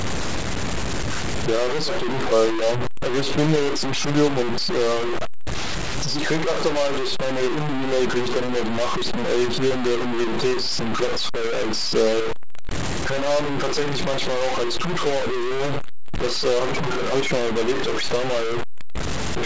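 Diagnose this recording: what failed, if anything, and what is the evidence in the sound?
Low bit depth without dither runs through the whole clip: harsh, grainy distortion moves with the speech, nearly as loud as the speech itself, and quiet passages sputter or drop to silence. That points to likely truncation to about 3 bits during sample-format conversion, while the call path's 8 kHz band limit is normal.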